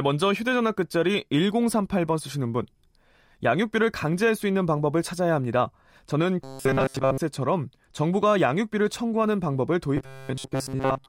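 From 6.44 to 7.18 s and again from 9.97 s to the end, the speech goes robotic: a stiff metallic buzz at 134 Hz, which fits a loop of roughly 7.5 ms. It's likely from repeated short buffers standing in for most of the missing audio.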